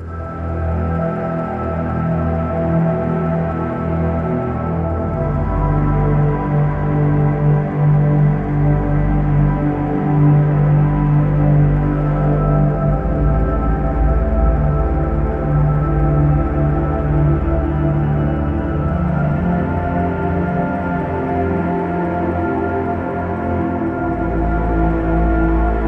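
No technical faults occur at any point in the sound, so there is nothing to describe in time order.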